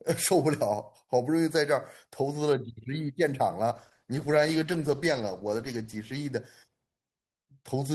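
Speech with a call bitrate drop from 3.77 to 6.39 s: the sound turns rough and muffled, consistent with the encoder falling from about 32 to 13 kbps. Unlike packet loss, there are no gaps or glitches, only steady coarseness and lost treble until recovery.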